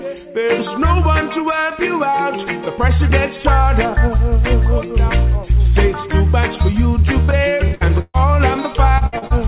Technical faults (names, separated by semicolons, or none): repeated packet loss (robotic sound)